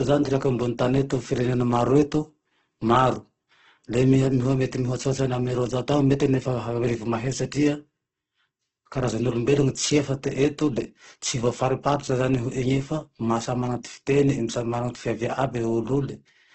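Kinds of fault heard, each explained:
Opus compression: Across the whole clip the speech has a heavy rough, grainy texture, and nothing comes through above about 8.2 kHz, so the top end is simply gone. That points to Opus, likely running in its music (CELT) mode at a low rate around 12 kbps. When bits run short it keeps each band's overall energy but fills in the detail with noise or folded copies of lower bands, so the result sounds coarse rather than swirly.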